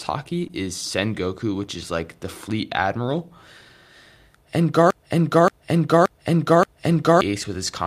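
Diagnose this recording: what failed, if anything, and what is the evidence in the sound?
At network level, a short concealed packet loss sits at 0.47 to 0.51 s: about 20 ms of speech never arrived, and roughly 13 ms was synthesised from the preceding sound before blending back. On a spectrogram it appears as a brief smeared, harmonically flattened patch.

From 4.90 to 7.21 s a broken-record loop repeats an identical 0.58 s fragment four times back to back. The waveform shows exact copies tiling end to end. The likely cause is a stalled player or stream resending its last buffer, discarding the speech that should have played.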